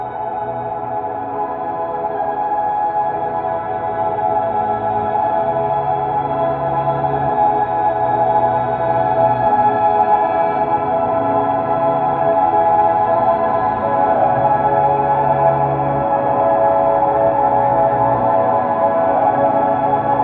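From 0.82 to 2.76 s there's imaging from linear upsampling: the rate looks to have been doubled, roughly 22 to 44.1 kHz, by straight-line interpolation. The top end dulls, and a faint mirror image, around 50 dB down, sits between 11 and 22 kHz, adding a slight metallic shimmer.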